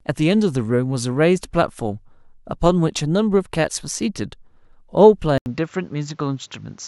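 At 5.38 s an 80 ms flat gap appears in the waveform, then the speech turns dull. The input likely switched to a poorer device, leaving the spectrogram empty above 7.6 kHz.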